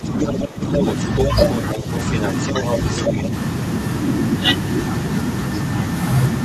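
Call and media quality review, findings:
Speech suppressed in double talk, 0.0–0.81 s: talker dips by up to roughly 15 dB across most of this span, not random dropouts. Likely echo canceller ducking both voices during overlap.

Other side's voice leaking through at 0.2–0.38, 0.78–1.3, 1.49–1.71 and 1.94–3.23 s: a second distinct voice, mostly as loud as the talker, quieter at 1.49 s. Likely residual loudspeaker echo, not crosstalk.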